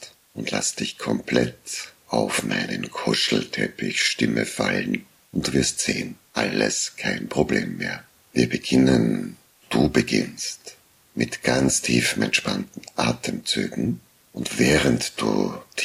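A constant, even hiss sits under the sound for its whole length, with no added distortion, the mark of low bit depth with dither: rounding to about 9 bits with dither turns the error into steady white noise roughly 35 dB below the signal. A spectrogram shows a flat noise floor across all frequencies.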